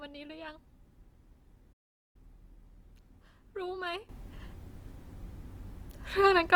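Opus compression, heard throughout this speech clip, makes tones rough, grainy and noisy even though the bandwidth stays full, which points to likely encoding in its music mode at roughly 24 kbps. A playback stall from 1.72 to 2.16 s silences the sound mid-flow for about 0.42 s, likely because the player ran short of data before resuming. A sudden gain jump at 4.09 s raises the sound and background noise together by about 13 dB until the end, likely from a gain change applied without a ramp.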